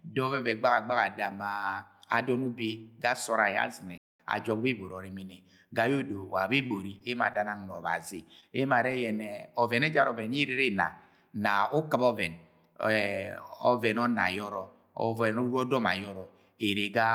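At 3.98 s the speech cuts to silence for about 0.22 s, resuming at 4.20 s. This is a playback stall. The player most likely ran dry of buffered data or had its output thread held up, so nothing reached the output until it caught up. The break is dead silence rather than a smeared or patched gap, and it lands mid-flow, so the speech halts abruptly and then picks up again.

From 6.57 s to 7.59 s there is repeated packet loss, heard as robotic sound. Over this one-second stretch about five separate holes open, the longest around 34 ms. Each is patched by stretching the preceding sound, so roughly a tenth of the span is synthetic fill. Because the patches come in quick succession, the speech turns choppy, and small fragments drop out between the intact parts.

A short concealed packet loss falls between 8.40 s and 8.44 s. About 20 ms of audio failed to arrive in time, and the receiver extrapolated from the preceding signal to cover the hole before blending back into the real stream. 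It is heard as a brief smear or wobble in the speech rather than a clean gap.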